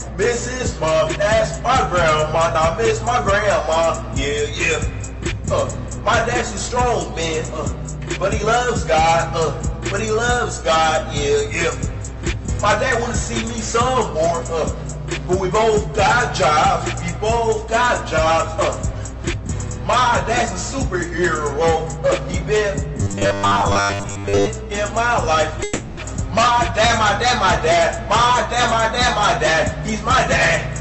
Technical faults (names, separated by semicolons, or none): robotic sound from repeated short buffers; call audio freeze